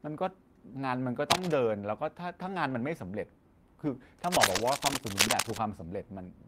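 Cable scratch noise runs from 1.30 to 1.56 s and again from 4.24 to 5.58 s in this speech recording: dense, uneven scratching and rustling sits a little above the speech, likely from a worn cable or connector whose contact resistance jumps as it moves. A lost packet rebuilt from error correction appears at 2.69 to 2.75 s and at 4.39 to 4.65 s, inside the second scratch. There is no gap, but about 40 ms and then 140 ms of speech sound rougher and noisier, because the decoder played a low-bitrate backup copy carried in the following packet.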